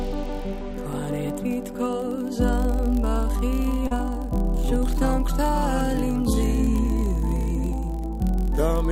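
A steady buzz runs through the whole clip at about 43.1 Hz. It comes from a block size mismatch (padded). One stage hands over blocks slightly shorter than the next stage reads. The shortfall is filled with zeros, so a tiny silent gap lands in every block. The buzz rate fits a 1024-sample read block. The gaps are very small, so the audio runs only marginally slow, at 0.999 times normal speed.

From 3.87 to 3.94 s there is a short concealed packet loss. About 40 ms of audio never reached the decoder in time. The receiver filled 32 ms of that hole by extending the sound just before it, then blended back into the real signal. The result is a brief smear in the sound.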